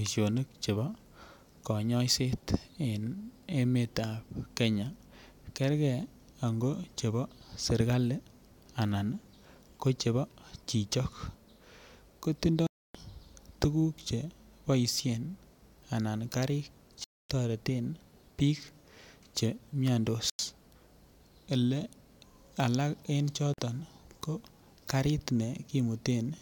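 At 12.67 s the speech cuts to silence for about 0.28 s, then returns at 12.95 s as though it had kept playing underneath. The same hard-edged gap recurs at 17.04 s for about 0.26 s, at 20.30 s for about 0.09 s, and at 23.54 s for about 0.05 s. The likely cause is a Bluetooth dropout: audio packets failed to reach the headphones in time, so playback was muted until valid packets arrived.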